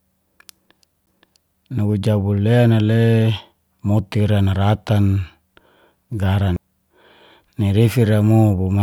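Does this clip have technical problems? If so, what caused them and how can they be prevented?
Yes. CD skips at 1.06 s and 6.56 s: each is a tick with a very brief mute, around 10 ms for the first and only a few milliseconds for the second, after which the speech resumes from a different point because the player's laser jumped to another turn of the disc's spiral. To prevent them, play from a clean, undamaged disc on a steady, vibration-isolated player, or rip it with an error-checking ripper.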